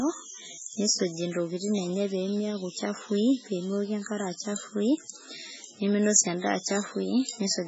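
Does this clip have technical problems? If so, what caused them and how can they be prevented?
Yes. Throughout the speech there is heavy damage that is likely MP3 compression. Nothing sounds above 7.7 kHz, and the watery, swirly texture and smeared attacks point to an encoder starved of bits, which fits a very low bitrate around 16 kbps. Weak frequency lines drop in and out between frames, causing the warbling. A simple low-pass filter would dull the treble but leave the remaining sound stable, with no swirling. To prevent it, encode at a much higher bitrate or use a lossless format.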